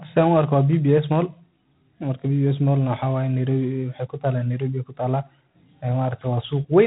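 A harsh, rasping hiss rides on the speech throughout, rising and falling with its level, and nothing passes above 3.9 kHz: G.726 ADPCM coding, consistent with 24 kbit/s.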